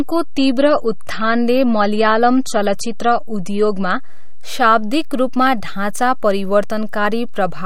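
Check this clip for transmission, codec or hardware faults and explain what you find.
Two faults are present: a low-bitrate adaptive stream start at the opening, and a DC offset across the whole clip.

Adaptive stream starting at a low bitrate, 0.0 to 4.0 s: the speech begins thin and smeared, which fits roughly 32 kbit/s MP3, then quality jumps just before "शाब्दिक रूपमा ढाँचा", consistent with 128 kbit/s. No energy appears above 13.2 kHz. The step-up has no gap or click, which separates it from a dropout or rebuffering.

DC offset, throughout: the waveform sits shifted from zero by a constant amount, eating headroom and showing as steady energy at 0 Hz. It is inaudible, unlike mains hum or rumble, which have a pitch or movement you can hear.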